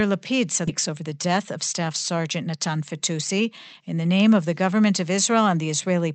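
A skip ahead occurs at 0.67 to 0.69 s. Roughly 0.7 s of speech never reaches playback, either lost in transit or discarded by the jitter buffer when it overflowed while newer audio was already queued. Nothing fills the hole, so the sound on either side is butted together almost directly. Listeners hear an abrupt jump forward, with a chunk of the utterance simply gone rather than a pause or a muffled patch.

A jitter buffer speed-up follows from 0.89 to 2.66 s. The buffer holds more audio than its target, so the receiver trims it by repeatedly cutting out short slices one or a few pitch periods long, about 0.2 s in total. Playback runs at roughly 111% speed while the pitch stays unchanged, so this stretch of speech sounds rushed and clipped in its rhythm. The audio, carried through an Opus call path that adds its coding noise and an 8 kHz band limit throughout, then settles back to normal pace.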